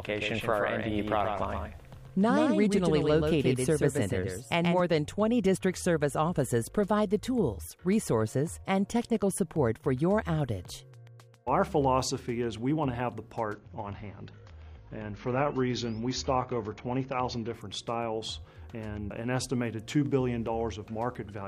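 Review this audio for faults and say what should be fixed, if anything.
A doubled audio track runs from the start to 4.8 s: a second full-band copy sits roughly 150 ms behind, about 5 dB down, with no decay, and it stops abruptly. The likely cause is a second capture path or misaligned edit. Prevent it by routing each source once and checking alignment after edits.

From 13.54 to 17.54 s the adaptive stream drops to a lower bitrate: content above 7 kHz vanishes and codec artefacts thicken, switching suddenly with no gap, consistent with a fall from 96 to 24 kbit/s AAC. Prevent it by capturing from a stable connection or fixing the stream at one rendition.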